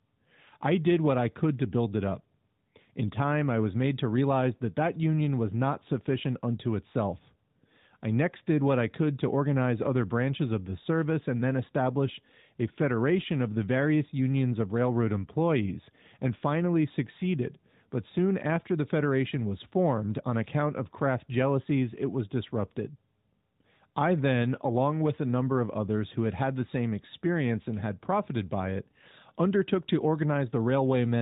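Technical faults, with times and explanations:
No technical faults can be heard: the speech comes through a narrowband mobile codec path at its top-quality mode, with the band stopping at 4 kHz and only a light synthetic tint from the coding.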